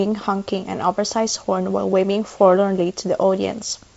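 Nothing's technically wrong with this speech clip; it's just carried over G.722 wideband telephone coding at 56 kbit/s, so there's nothing up above about 7.7 kHz.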